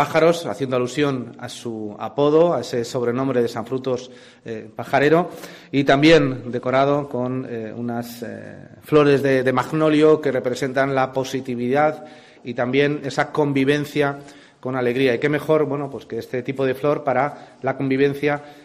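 Nothing in the recording stood out as a technical problem on listening.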